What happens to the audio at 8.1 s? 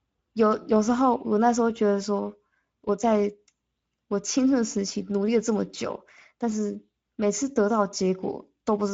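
At 8.1 s the speech carries Speex codec damage, present across the whole clip rather than just that moment. The CELP coder has too few bits for the excitation, which fits a rate near 17 kbps, so the speech sounds noisy and hoarse, with nothing above 7.6 kHz.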